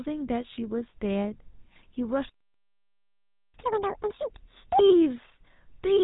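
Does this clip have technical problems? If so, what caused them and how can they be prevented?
Yes. GSM full-rate codec: throughout, the speech sounds buzzy and gravelly and nothing passes above 3.8 kHz. Unlike plain band-limiting, the roughness comes from pulse-driven excitation. A wideband codec prevents it.

Playback stall: from 2.30 to 3.54 s the sound goes silent for 1.25 s, likely because of a starved buffer or blocked thread. Deeper buffering prevents it.

Catch-up at higher speed: from 3.54 to 4.79 s the speech plays at double speed, pitched up roughly ten semitones, then returns to normal. Pitch-preserving time-stretching prevents this.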